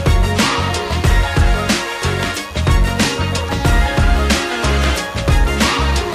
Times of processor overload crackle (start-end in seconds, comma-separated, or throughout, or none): none